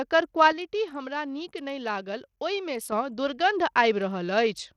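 Throughout the speech, the treble flickers and drops away, and a gritty, grainy noise rides on the sound, which points to Bluetooth SBC compression at a low bitrate, around 80 kbps. The likely mechanism is the coarse fixed sub-band bit allocation starving the upper bands. Unlike a plain low-pass filter, the top end here comes and goes rather than simply stopping.

From 0.52 s to 2.92 s the level drops abruptly by about 6 dB and then snaps back. This fits one channel dropping out, most likely with the remaining channel summed to mono. The sudden step and flat hold distinguish it from a gradual fade or gain riding.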